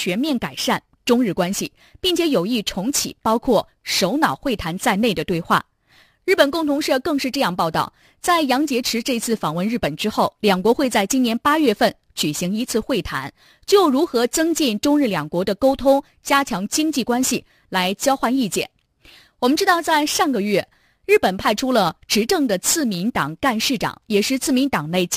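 Speech runs with sample clock jitter throughout. An unsteady converter clock, wandering around ten microseconds, adds roughness riding about 20 dB below the voice, strongest on loud passages.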